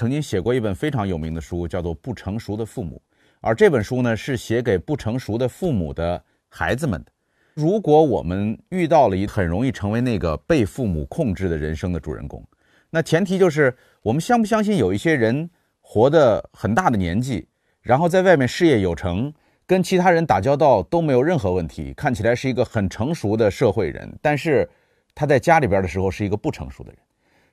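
At 9.27 to 9.29 s the speech jumps abruptly forward with a small blip. This is likely a stream segment skipped, where a failed chunk is dropped and playback resumes later.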